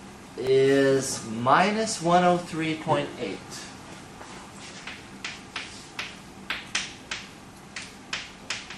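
A repeated buffer at 0.47 s: fresh audio missed its deadline, so the output replayed the last tiny block twice more. Each repeat lasts about 1.33 ms, which fits a 64-sample buffer, so it comes across as a brief click or buzz rather than a stutter.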